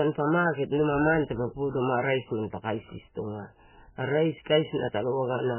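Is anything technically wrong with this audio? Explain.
Yes. Throughout the speech, the signal has likely been through heavy MP3 compression at a very low bitrate, roughly 9 kbps. Starved of bits, the encoder cut the treble at a fixed point, leaving nothing above 3 kHz, and discarded weaker frequency lines that then flicker in and out between frames. The result is a muffled, band-limited sound with a watery, swirling texture, metallic chirping on sibilants, and consonant attacks smeared rather than crisp.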